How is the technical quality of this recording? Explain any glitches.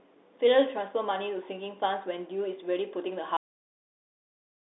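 Technical quality is poor: the speech has been through a narrowband Bluetooth headset link, and the recording ends abruptly.

Bluetooth CVSD headset codec, throughout: the audio is encoded one bit per sample, each bit only nudging the level up or down with an adapting step size, which fits a 64 kbps CVSD link. The band runs roughly 300 Hz to 3.7 kHz, with nothing above 3.8 kHz. Loud high sounds outrun the step and distort, s sounds turn scratchy, and a granular hiss sits under the speech.

Cut-off end, at 3.37 s: the final stretch of audio was never written or played out, so the speech stops mid-sound and drops straight to digital silence with no natural decay. That silence lasts until the clip ends.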